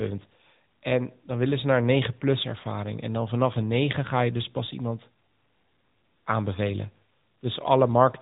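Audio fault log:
Throughout: AMR narrowband mobile codec. The speech has gone through the narrowband mobile coder, which samples at 8 kHz and rebuilds each 20 ms frame from a vocal-tract filter excited by a handful of pulses per 5 ms subframe. Nothing above 3.8 kHz survives, so sibilants lose their edge and the sound turns boxy. The coding damage is plainly audible, with a buzzy, synthetic texture that fits an upper bitrate mode of around 10 kbps.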